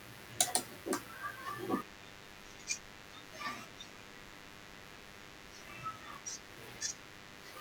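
A speech recording carries DECT cordless phone buzz from start to finish: a thin, steady 100 Hz buzz, rich in harmonics, sitting about 15 dB beneath the voice. A nearby handset or base transmits a burst every 10 ms, which the audio circuitry rectifies. Unlike smooth mains hum, it sounds raspy rather than tonal.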